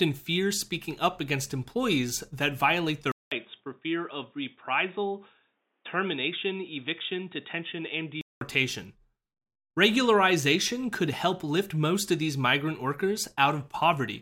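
At 3.12 s, after "employees that violate their", a 0.2 s gap, then dull, quieter audio with nothing above 3.8 kHz until 8.41 s, likely an input switched to a poorer device.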